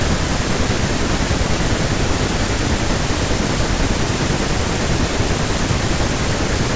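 A speech recording with nothing technically wrong with it.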